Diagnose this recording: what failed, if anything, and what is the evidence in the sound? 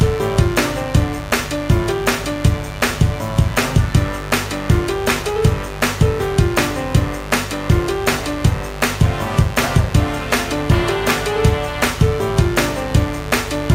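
A mains buzz sits under the whole recording, roughly 10 dB below the signal, pointing to the analogue wiring. Its raspy edge, not a smooth hum, comes from switching spikes twice per 50 Hz cycle, spreading harmonics up into several kHz through a dimmer, rectifier or missing shield.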